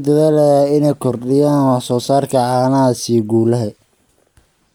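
At about 2.02 to 2.08 s the speech briefly jumbles, with a short scrambled blip. This is chunks out of order: a 20 ms chunk of audio was delivered or written two chunks late, so it plays after the two chunks meant to follow it. Nothing goes missing, but the wrong sequence creates three abrupt joins where the waveform doesn't line up.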